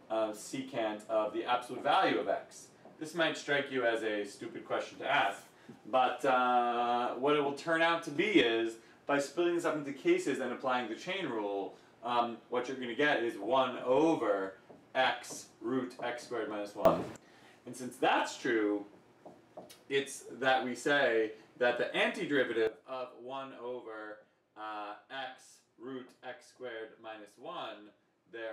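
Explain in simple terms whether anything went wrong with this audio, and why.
Yes, something went wrong. The level jumps abruptly three times, a sudden gain jump. It gets louder at 8.16 s until 8.41 s, much louder at 16.85 s until 17.16 s, and quieter from 22.67 s to the end. The background jumps along with it. The likely cause is a volume change applied instantly instead of gradually.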